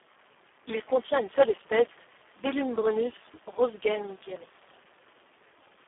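A speech recording carries heavy Speex codec damage throughout, sounding hoarse, buzzy and close to robotic, which points to a very low setting near 4 kbps. A spectrogram shows energy confined to roughly 300 Hz to 3.4 kHz, smeared harmonics, and nothing above 3.6 kHz.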